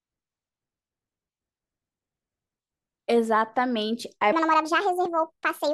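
A speech recording in which the final stretch, from 4.32 s to the end, has a section at the wrong speed: it runs 1.47 times faster, so the voice jumps abruptly to a hurried pace and sits roughly seven semitones higher. The likely cause is that segment being resampled or played against a mismatched clock.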